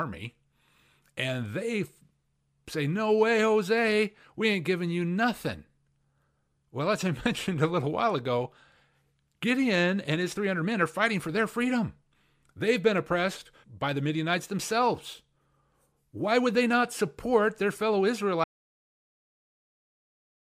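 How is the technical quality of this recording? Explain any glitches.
The recording has one fault. An audio dropout to silence starts at 18.44 s and runs to the end: the speech cuts off abruptly into digital silence with no room tone, likely from lost input while recording continued.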